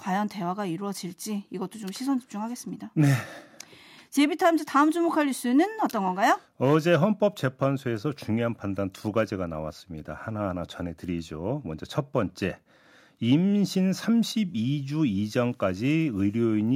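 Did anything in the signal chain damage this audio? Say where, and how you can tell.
No, nothing damaged this audio.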